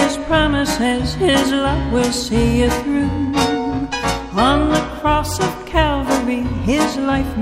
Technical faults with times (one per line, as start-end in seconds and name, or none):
none